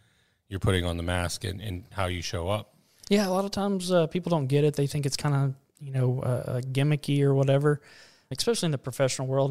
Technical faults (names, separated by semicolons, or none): none